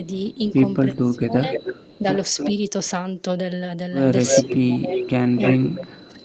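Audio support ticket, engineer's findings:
Speech suppressed in double talk, 0.93–2.05 s and 4.43 s to end. Talker dips by up to about 20 dB, then about 15 dB, for roughly 0.7 s in the first stretch. Likely echo canceller ducking both sides under overlapping talk.

Echo leak, 1.53–1.99 s, 2.35–2.52 s, 4.25–4.57 s, 4.93 s to end. Voice returns 300 ms late at about −10, −5, +5 and −5 dB relative to speech. Likely far-end loudspeaker pickup not fully cancelled and sent back.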